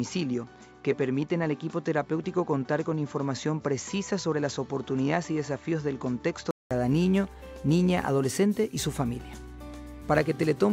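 Up to about 6.71 s everything above 7.6 kHz is missing and it sounds dull, then a 200 ms gap, likely an input switched to a poorer device.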